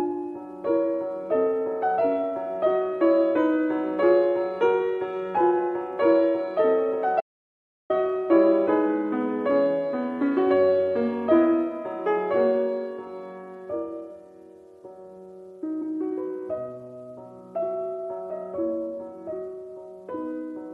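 At 7.21 s the audio drops out to silence until 7.90 s, a gap of about 0.69 s with no room tone at all. This is an audio dropout to silence, likely from the input being lost while the recorder kept writing silence.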